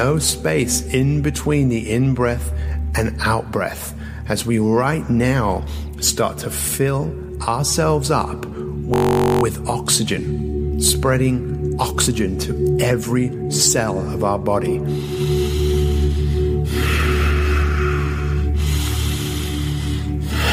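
At 8.94 s the sound locks into a system hang loop that lasts until 9.43 s. The computer or driver stalled while the audio hardware kept replaying its ring buffer. One fragment of about 21.3 ms repeats exactly, around 23 times. That loop length fits a 1024-sample buffer. Because the fragment is so short, the repeats fuse into a steady buzz near 46.9 Hz rather than a stutter. Playback then resumes with essentially nothing missing.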